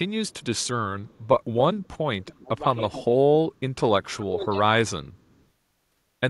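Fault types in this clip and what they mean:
Echo leak: A delayed copy of the speech trails the original by about 280 ms. The likely cause is an echo canceller on a loudspeaker end that let part of its microphone pickup leak back. It appears at 0.28–0.67, 1.04–1.41, 1.79–2.34, 2.77–3.05, 4.41–4.45 and 5.13–5.44 s. It is mostly about 35 to 40 dB below the speech. It grows to about 25 dB down, then about 15 dB down near 2.8 s.
Speech suppressed in double talk: The speech drops sharply while the other side is also talking. The likely cause is an echo canceller that could not tell the talker from loudspeaker echo and turned both down. The first dip runs from 2.25 to 2.62 s and falls about 15 dB. The second runs from 4.1 to 4.57 s. It is deeper, about 20 dB, and lasts roughly half a second.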